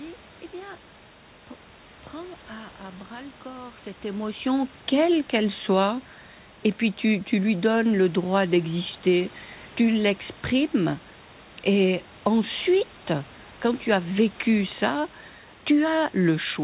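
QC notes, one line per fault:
No faults found.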